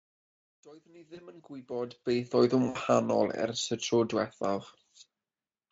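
From 0.0 to 2.54 s, truncation distortion on a fade affects the fade-in. The undithered gain stage, consistent with roughly 11-bit resolution, renders the quietest part gritty, worst up to 1.31 s. Speech codec concealment of VoIP packet loss appears twice. At 1.15 s, a 20 ms gap is filled with an extrapolation from the preceding speech. From 2.69 to 2.78 s, a longer 60 ms gap, consistent with three lost frames, becomes a fading buzzy tone or coloured noise with weak, distorted speech as it recovers.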